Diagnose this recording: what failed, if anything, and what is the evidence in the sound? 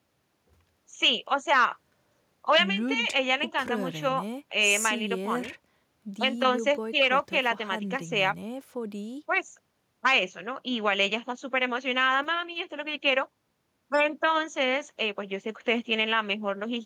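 Nothing failed in this speech recording, and no stage of the chain leaves any audible mark. There is no event at any point in the audio that calls for a diagnosis.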